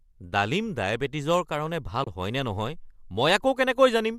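Speech with one fault: AAC frame loss with muting. Between 2.04 and 2.07 s the decoder lost about 30 ms of data, which fits three short low-delay frames, and filled the gap with silence. The overlapping windows fade the sound out and back in, leaving a brief soft-edged hole. The audio also carries a light coding texture, likely from low-delay AAC compression at around 64 kbps.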